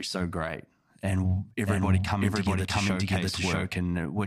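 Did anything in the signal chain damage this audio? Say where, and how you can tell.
Yes. A doubled audio track runs from 1.66 to 3.74 s: a second, full-band copy of the speech trails the original by around 0.7 s at about the same level, with no decay or room colour, and it switches on and off abruptly at those two points. That points to the same signal being recorded twice, likely through a slower parallel capture path at the driver or buffer stage, or an edit that left two misaligned copies stacked.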